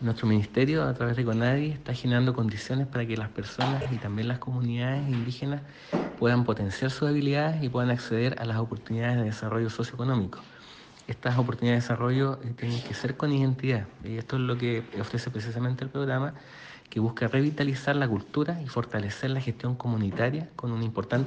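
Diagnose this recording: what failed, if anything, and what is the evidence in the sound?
Short stutters at 3.81–3.86 s and 16.67–16.72 s: repeated frames in the codec or storage stage, replaying a 24 ms block twice, then a 48 ms block once.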